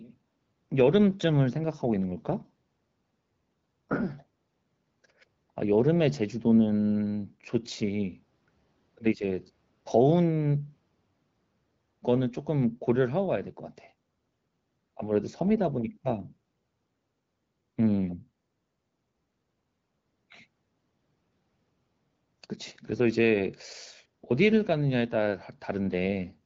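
The speech has no technical faults, and the AMR wideband (HD Voice) coding it passes through at 12.65 kbit/s keeps it clear, with the codec's synthesised fill above 6.4 kHz topping out the band at around 7 kHz.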